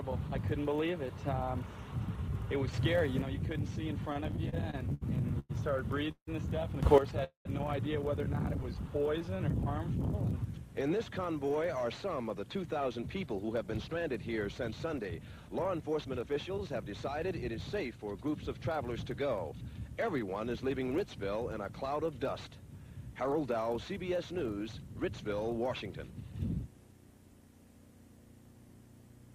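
At 2.73 s the level steps up by about 7 dB and holds until 3.22 s, with the background noise rising together with the sound. This is a sudden gain jump, likely a digital gain change applied from one sample to the next without a ramp. The same happens again from 6.83 to 6.98 s, this time by about 12 dB.

From 4.13 to 5.51 s there are repeated stalls (stutter). The jitter buffer ran dry ten times, and each gap was filled by continuing the last sound. The longest gap is 101 ms, and the fills total 300 ms, about 22% of that span. Nothing is lost, but the audio drags and hiccups.

At 6.11 s comes a call audio freeze, likely caused by packets held up in transit. The last sound is carried on as a fading buzz or hiss and then drops to silence for about 70 ms, inserting 156 ms before playback resumes where it stopped. A second freeze at 7.24 s inserts 211 ms, including about 110 ms of silence.

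From 8.77 to 9.94 s a jitter buffer slow-down stretches the audio to 93% speed at unchanged pitch. Repeated pitch periods or pause fragments add 84 ms to build up a reserve, so sounds come out drawn out.

From 11.83 to 17.99 s a jitter buffer speed-up runs the audio at 106% with pitch unchanged. Short pitch-period pieces, around 0.4 s in total, are cut to drain excess delay, and the result sounds hurried.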